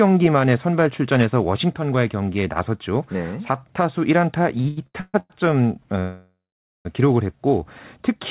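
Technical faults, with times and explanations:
4.58–5.32 s, repeated stalls (stutter): the sound catches six times in quick succession, each hold stretching the last sound for at most 134 ms, about 0.44 s of fill in all, nearly 60% of the span. Nothing drops out. Many brief hitches, rather than one long hold, mark a jitter buffer repeatedly running dry.
6.00–6.87 s, call audio freeze: one continuous hold of about 0.85 s, in which the last sound is extended, fades, and leaves roughly 0.48 s of silence before the audio resumes where it stopped, now that much later. The likely cause is packets held up in transit, on a band-limited call path with nothing above 4 kHz.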